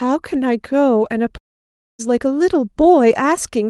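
From 1.37 s to 2.01 s the speech breaks off. The last sound trails into a short, fading buzz. About 0.59 s of near silence follows. This is likely a long network dropout. When audio resumes, roughly 0.62 s of speech is simply gone.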